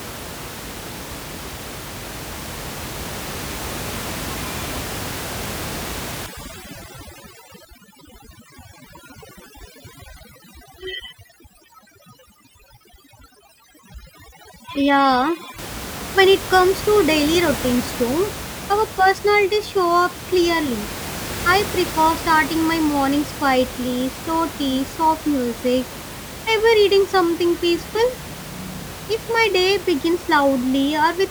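From 6.26 s to 15.58 s, ending just before "when it comes to", the speech passes through overdone noise removal. The room noise, about 13 dB below the speech, is treated so aggressively that bands near the estimated noise level are pushed almost to nothing. Quieter parts of the voice are removed along with it. The background drops and breaks up into twinkling specks. A spectrogram shows blank gaps scattered with isolated bright dots.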